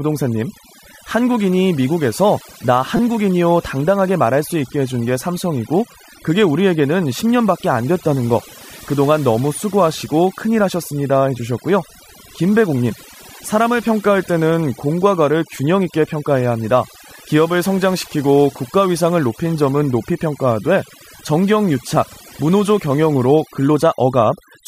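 A noise reduction stage was set far too aggressively for this speech recording. Across the whole clip, individual frequency bands that sit close to its noise estimate are pushed down or shut off entirely, and softer parts of the voice are removed along with them. The background drops to near silence scattered with small twinkling specks. That is overdone noise removal.

From 2.97 to 2.99 s, fresh audio failed to reach the output in time, so the device replayed its most recent buffer rather than going silent. Each segment lasts about 5.8 ms, which fits a 256-sample buffer, and it plays four extra times with an abrupt join at every repeat. Because the buffer is so short, this repeated buffer is heard as a click or brief buzz rather than a stutter, and no audio seems to be skipped.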